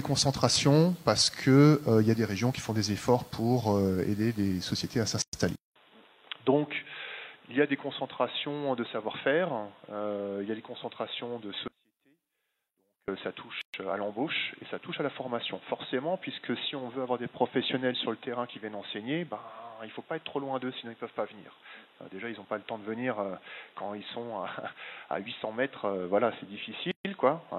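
At 5.22 s there's a gap at a join of encoded pieces: about 112 ms of silence dropped into otherwise continuous sound. It's what you get when separately encoded chunks are butted together without trimming, so the encoder's start-up delay and the padded last frame both stay in. The edges are abrupt but smeared by the codec, and the sound picks up exactly where it left off. The same thing happens twice more, at 13.61 s (about 123 ms) and at 26.91 s (about 136 ms).

Right after the first gap, at 5.56 s, the character changes for the rest of the clip. There's a 200 ms silence, and then the sound comes back duller and boxier, with nothing above 3.8 kHz, roughly 10 dB quieter, and a new noise floor sitting around 35 dB under the signal. That pattern points to the input likely being switched to a poorer device, such as a different mic or a headset in its call profile.

From 11.68 s to 13.08 s, a stretch of about 1.4 s, there's an audio dropout to a faint residue. 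The signal cuts out abruptly mid-flow, but the path clearly stays live, because a faint trace of the sound remains, roughly 35 dB down. Then it snaps back just as suddenly. That's not a pause or a fade, and the likely explanation is the wanted signal being lost upstream while everything after the break kept running.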